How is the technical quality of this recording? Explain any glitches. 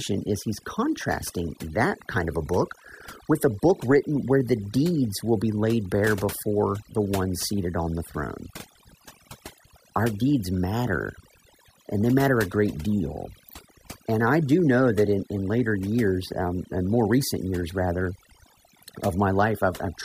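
The recording is marred by one fault, present from start to finish. Overdone noise removal: a noise reduction stage set too aggressively mutes frequency bands near its noise estimate, taking quiet parts of the speech along, so pauses sink to near silence with twinkling specks.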